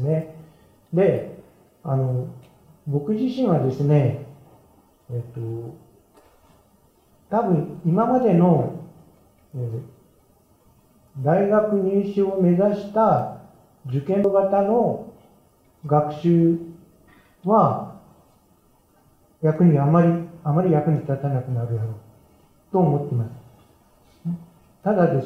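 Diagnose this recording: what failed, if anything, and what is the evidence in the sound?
What failed is playback, specifically a CD skip at 14.24 s. You get a tiny tick and a very brief mute, only a few milliseconds, and then the audio picks up from a different spot instead of continuing where it left off. That's the laser losing tracking, from a knock or a disc flaw, and landing on another turn of the spiral. The player briefly mutes its output and resumes from that new track position.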